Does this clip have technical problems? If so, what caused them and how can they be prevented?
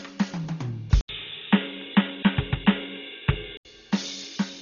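Yes. Throughout the music, the encoder was likely starved of bits in Dolby Digital compression, which fits a rate around 32 kbps. At that rate it cuts the band, leaving nothing above 7 kHz, and gives many spectral lines no mantissa bits, so the decoder fills them with dither noise. The result is heavy codec damage: a dull top end and rough, fluttering noise around sustained tones. Encoding at a higher bitrate prevents this.

From 1.01 to 3.65 s, the input likely switched to a poorer device, with the recording path handed mid-stream to a narrower-band source. An 80 ms silence marks the changeover, then everything above 3.8 kHz vanishes and the music turns boxy and muffled. A faint new hiss sits well below the music, and the loudness barely changes. At 3.65 s the original fuller sound returns. Locking the input device for the whole recording, and disabling automatic headset or call-profile switching, prevents this.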